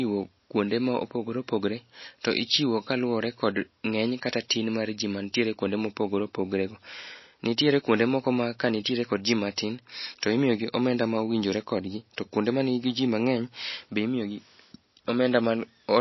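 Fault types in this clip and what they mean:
MP3 compression: The speech runs throughout with a watery, swirling texture, and nothing is left above 5.8 kHz, so s sounds lose their hiss and turn metallic. This is likely heavy MP3 coding at a low bitrate, around 24 kbps by the sound of it, dropping weak frequency lines that flicker on and off between frames. A simple low-pass filter would also remove the treble, but it would not leave this swirl.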